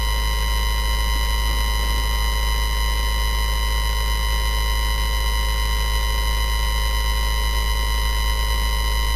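Nothing here stands out as a technical problem: it's a short recording of sounds, and no faults turn up anywhere in it.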